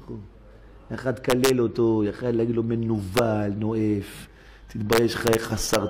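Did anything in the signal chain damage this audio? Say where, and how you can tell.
Yes, integer overflow, somewhere in the fixed-point gain or sample-format stage. Loud peaks crack violently at 1.30–1.50 s, 3.17 s, 4.93–5.35 s and 5.73 s, far harsher than clipping. The peaks there run only about 2 to 3 dB past full scale, but instead of limiting at the top, the integer math wraps around and flips each over-range sample to the opposite extreme.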